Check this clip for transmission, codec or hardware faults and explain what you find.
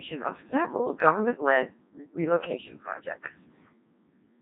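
The whole clip has gone through a Codec 2 vocoder, and it's heavily damaged. Only pitch, voicing, energy and a rough spectral envelope survive, rebuilt from sine waves, so the speech comes out robotic and buzzy, which fits a very low rate around 1.6 kbit/s.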